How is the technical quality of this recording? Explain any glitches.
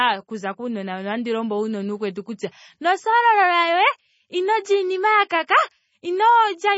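The recording's quality is poor. Heavy MP3 compression is the likely cause, and it affects the speech from start to finish. Nothing remains above 7.6 kHz, so the top end sounds dull and muffled. The encoder drops weak frequency lines, and they flicker on and off between frames. That gives the speech a watery, swirly texture. The damage points to a very low bitrate, around 24 kbps.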